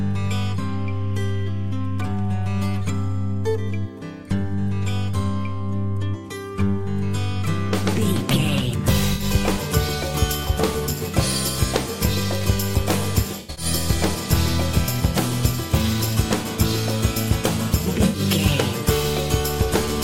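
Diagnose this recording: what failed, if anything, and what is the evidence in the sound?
Codec-stage AAC frame loss with concealment: the decoder rebuilt missing frames from the previous spectrum, leaving smeared, phasey patches at 9.13–9.24 s, 13.4–13.65 s and 18.05–18.2 s.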